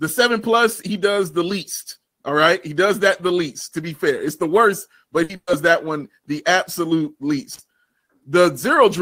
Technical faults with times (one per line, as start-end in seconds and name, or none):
5.23-5.50 burst of packet loss
7.53-7.59 intermittent contact